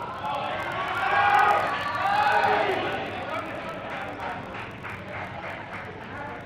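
A steady buzz runs under the sound from the start, rising and falling with its loudness. This is a filter restarted on every block: the filter discards its memory at each block boundary and begins again from silence, so every block opens with a tiny transient. Those transients repeat at about 43.1 Hz, which fits 1024-sample blocks, and they fuse into a low buzz whose strength follows the signal level.

Throughout the clip the timing feels slightly unsettled, with small, unevenly spaced hiccups instead of a smooth flow. The cause is clock drift between sender and receiver: the sending clock runs fast, by roughly five percent, so audio arrives quicker than it is played out. The receiving buffer keeps filling, and the receiver must repeatedly trim material to stop it overflowing, which leaves the sound's pacing faintly uneven.

From 2.15 s to 6.42 s those trims become repeated timing corrections. 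Short slices of audio are dropped again and again, always in the same direction but never at a regular interval, as the receiver tries to keep up with a sender running at about 105 percent speed. Each cut is small, so it registers as a slight skip or a momentary lurch in tempo, not as an obvious gap.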